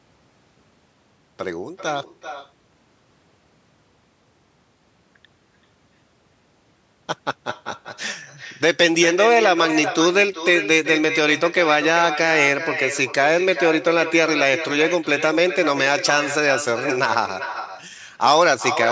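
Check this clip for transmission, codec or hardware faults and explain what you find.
The speech carries one fault throughout: echo with no canceller. The far end plays the call over a loudspeaker, its microphone picks that playback up, and nothing removes it. The speech therefore returns after the network round trip, roughly 0.4 s late and about 10 dB down, a thinner copy shadowing every phrase. The call's microphone processing, with nothing above 8 kHz, is working as expected.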